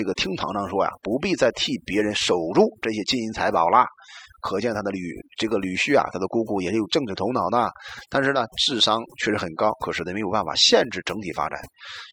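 Overdone noise removal runs through the whole speech clip: the noise reduction was set so aggressively that it switches off individual frequency bands near its noise estimate, taking quiet voice detail with them. Pauses fall to near silence sprinkled with twinkling specks.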